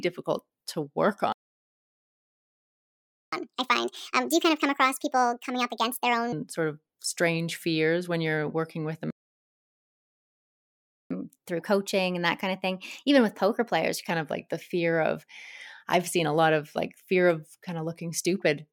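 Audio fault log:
1.32–3.32 s and 9.11–11.11 s, playback stall: the speech stops mid-flow for 2 s each time, first right after "to work", then picks up again. The silence is likely from the player running out of data or its thread being blocked. A stall differs from a dropout because the gap is long and is followed by a faster section.
3.32–6.32 s and 11.11–14.11 s, catch-up at higher speed: after each stall the backlog is resampled faster. It runs at 1.5 times speed with pitch up about seven semitones until "sort of strange fears". Later it runs at 1.1 times with pitch up about a semitone and a half until "of like the fear". Pitch rises with tempo, unlike time-stretching, then returns to normal.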